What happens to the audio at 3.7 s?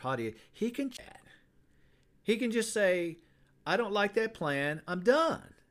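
Nothing goes wrong at 3.7 s: the speech there runs on without any audible break, distortion or other fault.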